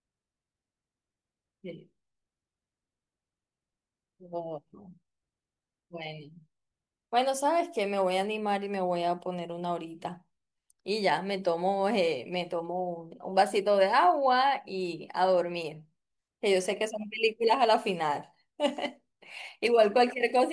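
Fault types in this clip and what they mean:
No faults can be heard anywhere in this recording.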